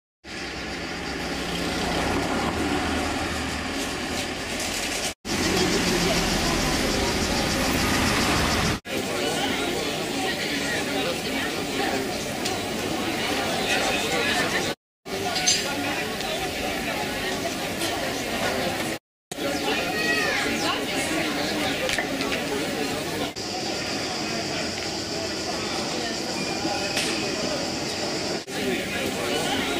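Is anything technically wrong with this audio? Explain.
No technical faults are audible.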